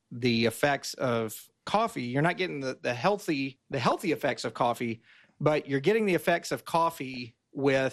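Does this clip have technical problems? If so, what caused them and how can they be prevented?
Yes. Throughout, the speech sounds dull, with a gurgling, granular grain that is plainly audible. This is likely MP2 compression at a low rate, around 80 kbps: upper sub-bands drop out and the rest are coarsely quantised. Unlike burbling, it never lets up. Encoding at a higher bitrate prevents it.

DAB burbling breaks in at 3.72 to 3.92 s and again at 6.93 to 7.17 s as short blips of noise confined to single sub-bands. Reception errors of a few tenths of a percent slipped past the error correction into the audio data. These errors come in short bursts rather than as constant dullness. A better aerial or a stronger signal prevents them.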